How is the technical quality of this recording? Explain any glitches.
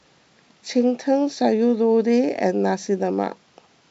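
No glitches: the speech is carried on G.722 wideband telephone coding at 64 kbit/s, with bandwidth up to about 7 kHz and at most a faint trace of the codec.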